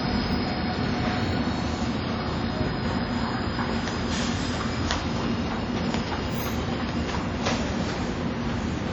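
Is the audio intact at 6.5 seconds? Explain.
No. At 6.5 seconds, as throughout the clip, the sound rings and smears, with a hiss that swells and fades with the signal. This is likely WMA compression. Coarse quantisation over long transform blocks spreads noise in time, pointing to roughly 32 kbps. Nothing remains above 19.4 kHz.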